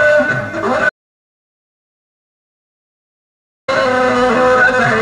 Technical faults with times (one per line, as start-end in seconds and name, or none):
0.89-3.68 audio dropout to silence